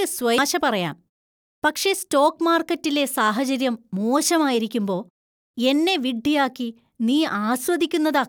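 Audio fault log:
0.38 s, damaged data in a compressed stream: a short blip in the speech where a stretch of the compressed data is corrupt, so the decoder misreads that frame, loses sync and hunts for the next valid frame header before normal playback resumes.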